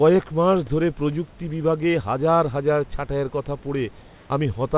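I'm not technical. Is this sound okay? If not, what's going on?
No. Right after "হাজার হাজার ছাঁটাইয়ের কথা", from 4.02 to 4.3 s, the room's background turns into a flat, featureless hiss at the same loudness. This is comfort noise in place of the background. The call likely stopped sending during the pause, and the receiver filled the gap with made-up noise.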